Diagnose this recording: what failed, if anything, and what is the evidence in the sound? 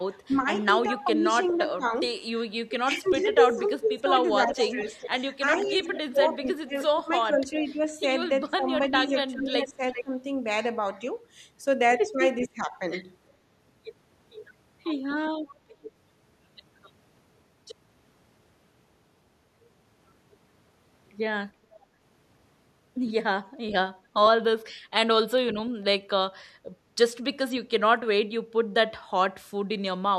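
Speech suppressed in double talk, 0.11–10.11 s, 12.43–12.81 s, 15.65–15.85 s, 21.79 s, 25.51–26.06 s: speech dips by up to about 30 dB, likely call-processing echo suppression during overlap.

Echo leak, 0.3–12.48 s and 15.5 s: a copy delayed by 0.4 s sits about 10 dB, later about 25 dB, below the speech. Call processing likely left residual loudspeaker echo uncancelled.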